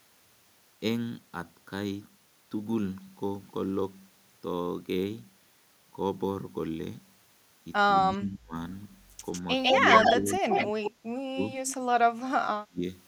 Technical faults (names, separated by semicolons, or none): speech suppressed in double talk; echo leak